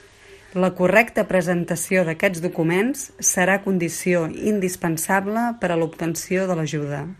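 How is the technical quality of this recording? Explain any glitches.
The technical quality is poor, with one short glitch near the end.

MP2 compression, running throughout, is the likely cause of the dull, granular sound: too few bits leave upper sub-bands switched off and the rest coarsely quantised, so the speech flickers and gurgles, which fits a rate around 80 kbps.

DAB burbling appears from 6.18 to 6.37 s, just after "condició indispensable per a". A small fraction of bit errors slipped past error correction, corrupting audio data across what points to about eight frames, producing brief blips of noise in single sub-bands.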